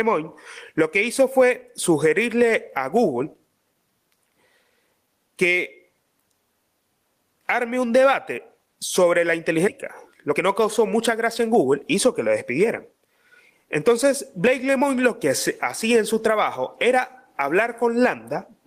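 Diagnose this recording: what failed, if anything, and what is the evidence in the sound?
Gain pumping throughout: the gain ducks by about 15 dB under each loud syllable, likely from excessive input gain driving a fast limiter in call processing.

Skip ahead at 9.67–9.78 s, right after "un debate sobre la": about a second of speech is missing. The network or jitter buffer discarded queued audio and joined the two sides almost directly.

Jitter buffer speed-up from 10.22 to 12.45 s: speech runs at 110% speed at unchanged pitch. The buffer trimmed pitch-period slices, about a fifth of a second in total, to cut its excess delay.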